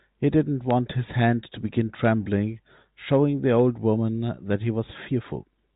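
Nothing faulty can be heard in this G.726-coded speech.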